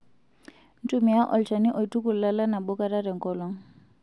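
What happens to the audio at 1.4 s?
Nothing goes wrong at 1.4 s; the speech runs through that moment intact, with no break, click or change in level.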